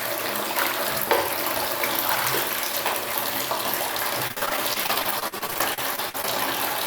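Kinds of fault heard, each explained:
Repeated packet loss (robotic sound): From about 4.27 s to 6.25 s the audio turns choppy, with small pieces dropping out. The stream keeps losing or receiving late chunks of data, more than twenty times here. Each hole, none longer than about 49 ms, is covered by stretching the preceding sound, filling roughly half a second in all, about a quarter of that stretch. Some 360 ms still go missing outright.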